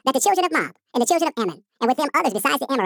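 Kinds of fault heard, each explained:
Audio read two samples at a time (double speed): The playback side takes each pair of samples as one frame, as if the stream had two channels or wider samples. The speech runs twice as fast and a full octave higher.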